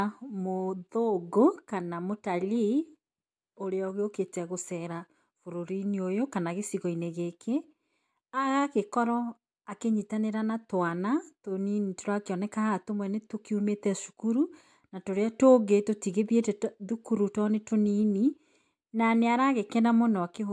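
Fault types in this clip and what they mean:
Nothing stood out on listening to this speech recording.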